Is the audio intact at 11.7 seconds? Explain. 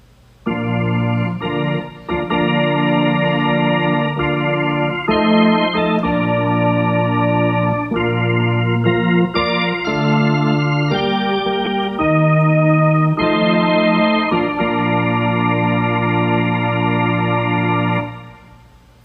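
No. Around 11.65 to 11.67 s there are lost LE Audio frames, about 15 ms, which fits two frames. The LC3 decoder filled the gap by reusing the last spectrum with random signs, so it sounds like a brief noisy smear rather than the dead silence of a plain dropout.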